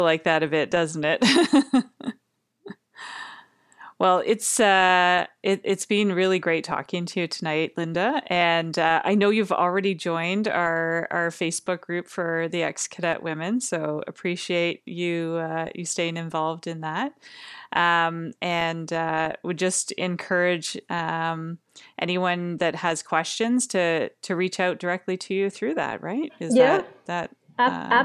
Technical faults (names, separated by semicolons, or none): none